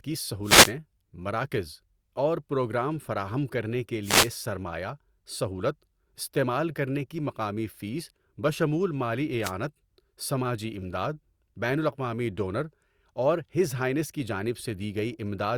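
The wireless microphone's FM signal fades as reflections cancel, so receiver noise rises into wireless microphone noise hits: swishes of static at 0.43–0.73 s, 4.02–4.31 s between "پروگرام فراہم کرنے کے" and "سرمایہ سہولت استعمال کرنے", and 9.42–9.52 s after "مقامی فیس بشمول مالی".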